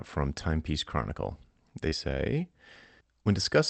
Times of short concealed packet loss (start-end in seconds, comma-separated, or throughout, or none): 1.89-1.93